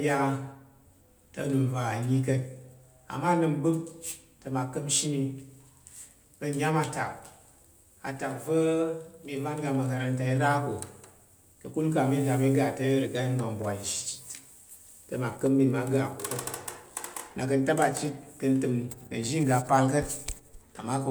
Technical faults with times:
none

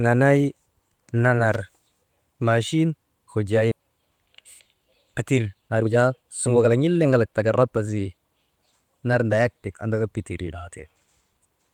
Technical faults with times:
1.53-1.60 loose connector crackle
3.71-3.73 skip ahead
5.45-7.50 jitter buffer speed-up

